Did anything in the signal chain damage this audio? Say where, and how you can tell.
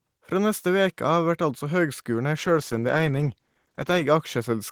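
Yes, there's a call bitrate drop in the codec stage from 2.36 s to 4.09 s. The sound goes rough and watery, and the top end gets duller, holding at its worst for about 1.67 s. That fits the encoder being pushed from around 32 kbps down to about 13 kbps after the bandwidth estimate fell. With so few bits, Opus quantises coarsely and trims the high band.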